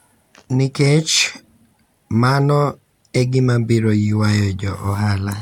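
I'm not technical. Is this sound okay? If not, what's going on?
Yes, the recording is fine: nothing in it is broken or glitching.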